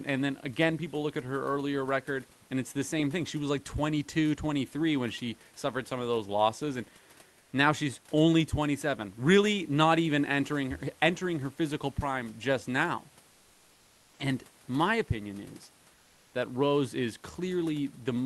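Comfort noise in place of the background at 13.31–14.19 s and 15.93–16.33 s in this speech clip: the pause's room tone turns flat, featureless and about 2–3 dB quieter, likely from Opus discontinuous transmission.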